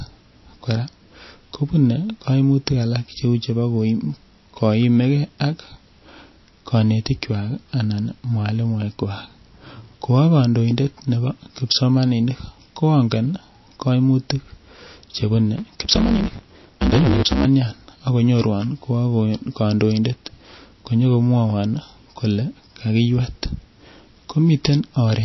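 MP3 compression runs through the whole clip. The speech has a watery, swirling quality as weak frequency lines drop in and out from frame to frame, and nothing is heard above 5.8 kHz. The damage is plainly audible, likely from a low bitrate around 27 kbps.

Block size mismatch (truncated) occurs from 15.57 to 17.46 s. One stage writes longer blocks than the next stage reads, so the tail of each block is discarded, which fits 512-sample blocks. The result is a 138 Hz buzz at the block rate, and the speech runs 1.6 times fast.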